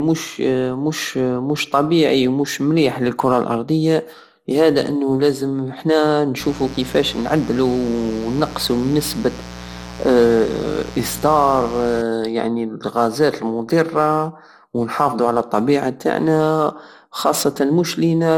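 Throughout, generation loss, likely from around seven MP2 re-encodes near 96 kbit/s, leaves the speech swirly, hollow and smeared, with blurred attacks and nothing above 17.9 kHz.

From 6.40 to 12.01 s, sharp switching spikes from 60 Hz mains leak in as mains buzz, a steady raspy drone about 15 dB below the speech.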